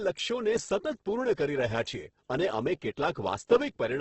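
Video or display buzz runs throughout: a screen or video cable couples its 50 Hz field rate into the audio as a buzz with hash, roughly 45 dB below the speech.

Opus compression is the likely cause of heavy damage throughout. Starved band energies get filled with noise, making speech grainy and rough, with nothing above 8.1 kHz, which fits about 12 kbps.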